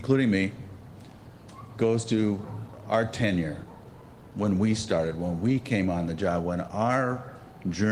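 Nothing in the audio points to a technical fault; the signal holds steady throughout with no audible dropouts, distortion, timing glitches or level problems.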